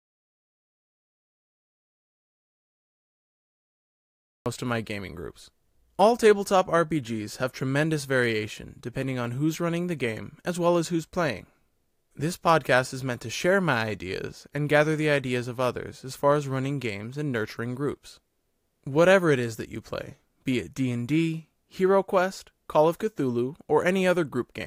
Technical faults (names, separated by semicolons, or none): audio dropout to silence